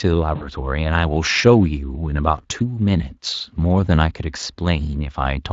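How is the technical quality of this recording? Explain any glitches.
One glitch stands out, near the start. At 0.35 to 0.49 s there is VoIP packet loss concealed by the speech codec, with the Speex coding around it adding only light colouring. About 60 ms went missing, which fits three lost 20 ms frames. The decoder extended its last pitch and filter at falling gain. The voice is briefly stretched out, then fades. Each frame builds on the last, so the distortion persists past the gap itself.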